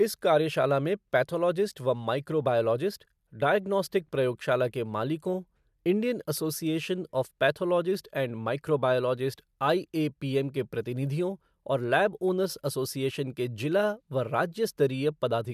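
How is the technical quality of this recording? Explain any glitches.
Nothing in the recording stood out as a technical problem on listening, so there are no glitches to explain.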